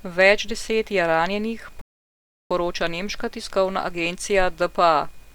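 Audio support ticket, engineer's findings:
Rebuffering stall in the playback client: buffer ran dry at 1.81 s, speech drops to silence until 2.51 s, then resumes intact. Adds 0.69 s.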